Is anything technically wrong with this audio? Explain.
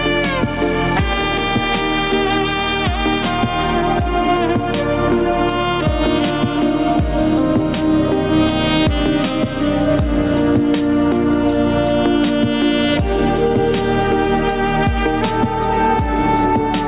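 Yes. Throughout the clip there is gain pumping: the gain swings by roughly 5 dB, likely from excessive input gain driving a fast limiter on each loud sound. Separately, nothing is heard above 4 kHz, which fits a narrowband call codec such as G.711.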